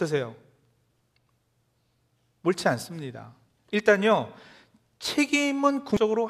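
Near the very end of the speech, from 5.97 to 6.00 s, a brief burst of garbled sound cuts in for roughly 30 ms, a short blip that replaces the sound rather than sitting under it. This is damaged data in a compressed stream: a stretch of the encoded bytes was corrupted, so the decoder could not read those frames properly, lost its place in the stream and had to find the next valid frame header before clean decoding resumed.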